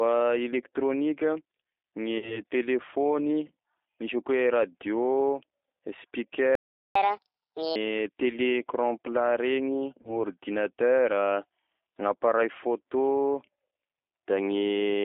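Throughout, the speech sounds narrow, slightly rough and synthetic, limited to about 300 Hz to 3.7 kHz: the G.729 codec at 8 kbit/s rebuilds each frame from a vocal tract filter and a few pulses.

From 2.18 to 2.41 s the sound smears into a buzzy, fading tone and stays weak afterwards. This is VoIP packet loss concealed by the speech codec: about 40 ms went missing, which fits two lost packets, and the decoder extrapolated from earlier frames.

At 6.55 s the sound stops dead for about 0.4 s until 6.95 s, a playback stall, likely from the player running out of data.

From 6.95 to 7.76 s the speech runs fast and high, about a fifth above normal. This is catch-up at higher speed, with the backlog resampled at 1.5 times speed to recover lost time.

From 10.02 to 10.15 s there is a shorter buzzy smear and weak patch, another instance of packet loss concealment, this time covering about 20 ms, which fits one lost packet.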